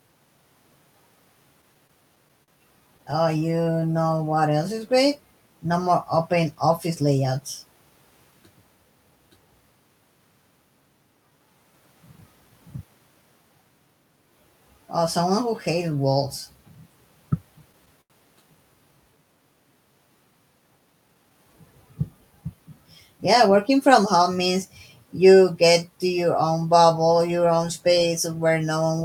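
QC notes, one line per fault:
1.61–2.50 s and 2.98–3.67 s, repeated stalls (stutter): six short hitches in each span, up to 42 ms, where the jitter buffer emptied and the receiver stretched the last sound.
3.80–4.60 s, jitter buffer slow-down: sound drags to 91% speed at unchanged pitch, as the receiver repeated pitch periods, adding 82 ms to rebuild its reserve.
6.55–7.41 s, jitter buffer speed-up: sound hurries to 108% speed at unchanged pitch, as the receiver cut about 70 ms of pitch periods to shed excess buffered delay.
17.60–18.12 s, repeated stalls (stutter): four hitches with one long 87 ms drag, where late packets starved the buffer and the receiver held the last sound.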